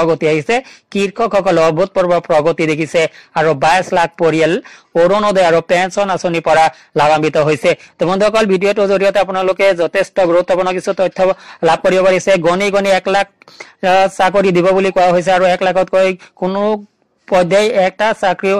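No technical faults can be heard anywhere in this clip.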